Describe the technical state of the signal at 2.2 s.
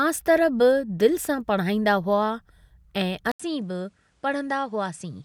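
At 2.2 s the speech signal is intact, with no dropout, clipping, glitch or other audible fault at that point.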